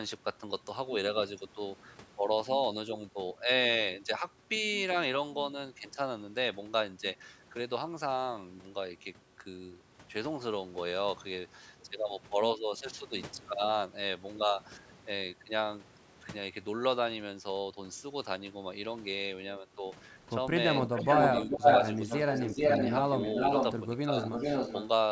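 A speech recording from a call, with a band that stops at 8 kHz as the call's microphone processing shapes it. From 20.76 to 23.76 s an echo leak is heard: a distinct delayed copy of the voice trails it by 427 ms, a little louder than the original, most likely because the far end's echo canceller let its loudspeaker pickup through. A fixed gap of nearly half a second and a separable repeat set it apart from room reverberation, which smears into a continuous tail. It returns from 24.18 to 24.88 s at 434 ms delay, now about as loud as the speech. Between 21.46 and 21.66 s the talker's own voice drops sharply, by something like 15 dB, for about a fifth of a second while the echo overlaps. That is speech suppressed in double talk, likely the canceller ducking both signals when it could not tell them apart. It is a dip tied to the overlapping sound rather than a clean dropout to silence.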